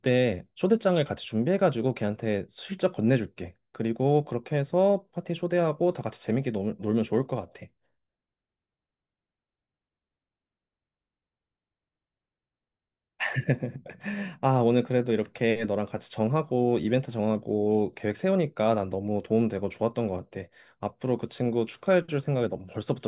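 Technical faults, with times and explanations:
No technical faults can be heard anywhere in this recording.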